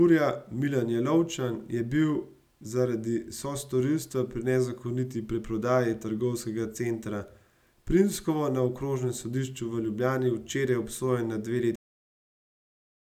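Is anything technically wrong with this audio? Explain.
Yes. At 11.76 s the speech stops abruptly mid-sound and drops straight to digital silence with no decay: a cut-off end, where the final buffers were never written or played.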